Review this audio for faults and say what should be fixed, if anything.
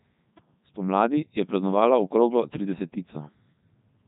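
Codec 2 vocoder damage runs throughout the speech, heavily: the decoder rebuilds the voice from sine waves using only pitch, voicing, energy and a coarse spectral envelope, so the waveform is lost. It sounds robotic and buzzy, with nothing above 3.8 kHz, which fits Codec 2's 3.2 kbit/s mode. To prevent it, record or transmit over a waveform codec at an adequate bitrate rather than a low-rate vocoder.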